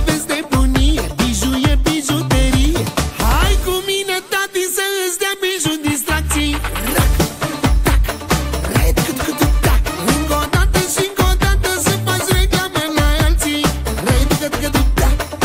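A single burst of DAB burbling sits at about 5.87 s: a brief watery blip where corrupted MP2 data, from a bit error rate well under a tenth of a percent, put short blips of noise into individual sub-bands. The spectrogram shows isolated bright blocks in narrow bands, consistent with a couple of damaged frames.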